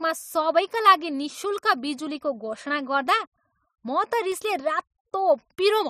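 A scratch on the disc defeats error correction once per revolution, so from 4.19 to 4.57 s CD scratch ticks sound as four brief, regular clicks, each well under a millisecond.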